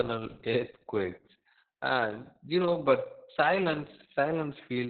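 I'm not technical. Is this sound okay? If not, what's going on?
No. From start to finish the speech has Opus voice compression applied very heavily. Nothing above about 4.4 kHz survives, so it sounds muffled like an old phone line, but it's also hoarse and slightly robotic, which plain muffling wouldn't cause.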